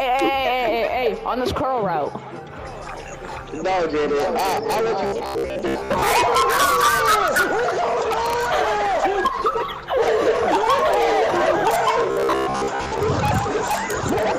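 Robotic sound from repeated short buffers appears from 5.07 to 6.10 s and again from 12.11 to 12.99 s. The audio becomes a rigid, metallic buzz at 66.7 Hz. About half the first stretch and most of the second are repeats. This likely comes from 15 ms chunks being replayed while real audio is skipped.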